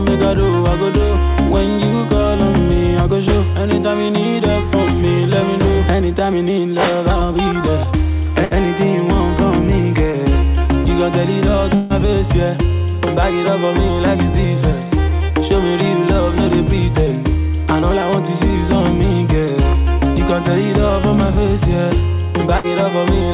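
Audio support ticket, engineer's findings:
Burst of packet loss, 8.45–8.54 s: brief smeared buzz/hiss where the sound stalls, then skips ahead. Jitter buffer concealment stretching the last frame for about 58 ms over roughly 60 ms of lost packets. That audio is gone.

Same burst of packet loss again at 22.58–22.67 s: identical signature, about 57 ms of faded repeat, then the sound jumps forward past about 60 ms of missing material. Receiver-side concealment, not a capture problem.

Long network dropout, 11.75–11.93 s: longer held buzz/hiss that decays without ever reaching silence before audio resumes further on. Likely a network stall. Concealment covers about 151 ms, roughly 150 ms lost. Band-limited throughout to 4 kHz, consistent with G.711 mu-law at 64 kbps.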